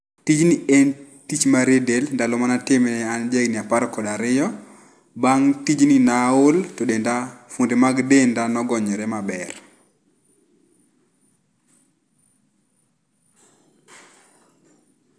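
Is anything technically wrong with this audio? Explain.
No, nothing technically wrong can be heard here.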